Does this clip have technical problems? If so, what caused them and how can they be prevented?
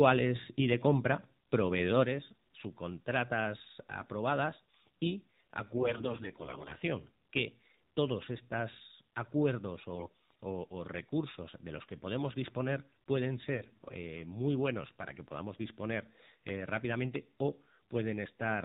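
Yes. Three kinds of fault are audible.

The AMR narrowband mobile codec shapes the whole clip. Nothing above 4 kHz survives, and the speech has a buzzy, synthetic edge that fits a low AMR-NB mode near 7.4 kbps. A simple low-pass filter would dull the sound without this vocoder-like texture. Prevent it by carrying the call over a wideband or higher-rate codec.

One channel drops out at 2.05 s and stays gone to the end. The level falls abruptly by about 6 dB in one step, not as a gradual fade, which likely points to a lost stereo channel before the mono sum. Prevent it by checking connectors and channel routing before recording.

AMR bit errors appear from 5.76 to 6.76 s, from 9.96 to 10.08 s, and from 13.56 to 13.94 s. Pitch and level hold, but the speech turns hoarse, scratchy and gargly. Unlike packet loss, there are no gaps or muting, which fits a bit error rate of roughly one in ten, nearer 7 percent in the last burst, on a weak link. 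Prevent it with a stronger radio connection or better error protection.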